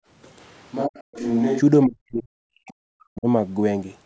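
From 0.00 to 0.07 s the background is gated by the echo canceller. The loudspeaker was playing, so the canceller pulled the microphone down hard. Room sound drops by about 35 dB for that brief moment. Then it returns.

From 0.41 to 1.59 s the sound turns hollow and roomy. The level falls by roughly 5 dB. Background noise rises to around 30 dB below the speech. Bass thins. The likely cause is a switch to a distant microphone after the close one dropped out.

Within that span, from 0.86 to 1.22 s, the speech dips sharply, by roughly 40 dB at its deepest. It happens again from 1.86 to 3.27 s, where the speech fades and cuts out in pieces. This is likely speech suppressed in double talk. Both sides spoke at once, so the canceller turned the near talker down along with the echo.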